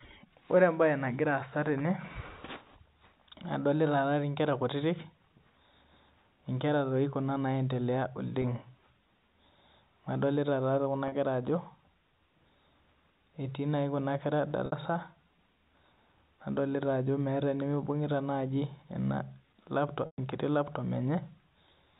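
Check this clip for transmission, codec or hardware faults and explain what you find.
The clip has four brief dropouts from packet loss with pitch repetition, carried over G.711 telephone coding with its band limit at 4 kHz.

At 8.42–8.44, 11.08–11.12, 14.66–14.72 and 20.06–20.18 s, lost audio of 20, 40, 60 and 120 ms is bridged by looping the last pitch period. The shorter gaps sound like a held buzz. The 120 ms one fades toward silence before speech cross-fades back.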